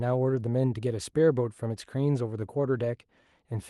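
Throughout the speech, clock drift between sender and receiver is present: the sender's clock runs roughly one percent slow, so the jitter buffer keeps draining and small timing hiccups recur. From 0.70 s to 3.22 s, repeated timing corrections stretch the audio to 99% speed, adding around 40 ms. A spectrogram shows tiny duplicated slices at uneven spacing, all lengthening the audio, against a band that stops near 12 kHz from the call codec.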